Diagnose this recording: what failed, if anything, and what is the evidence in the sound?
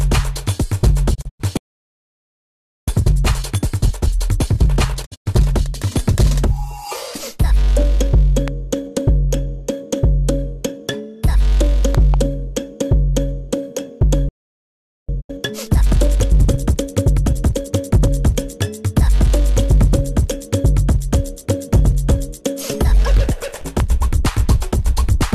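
Digital broadcast dropout at the receiver: at 1.13–1.41 s, 5.05–5.28 s and 15.20–15.31 s the sound fades out over 20 ms into holes up to 96 ms long. The waveform shows flat gaps and the spectrogram shows blank vertical bands.

Playback stall at the buffer stage: the audio halts for 1.3 s at 1.57–2.88 s and 0.8 s at 14.29–15.09 s, likely a buffer underrun. Both appear as long flat silences.

Time-compressed catch-up: from 2.88 to 5.88 s and 15.09 to 18.09 s the player runs at 1.25 times speed with pitch held. Spectrogram events look squeezed together.

Loud pop on the analogue or driver path: single pops at 8.48 s and 23.80 s, and two pops between 11.95 and 12.16 s, each about 10 dB above the signal. They are likely electrical transients, showing as thin full-band vertical spikes.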